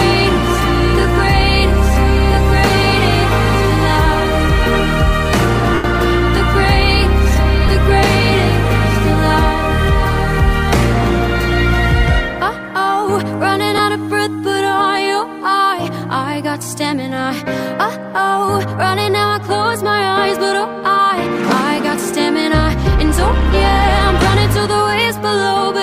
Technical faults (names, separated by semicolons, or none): lost LE Audio frames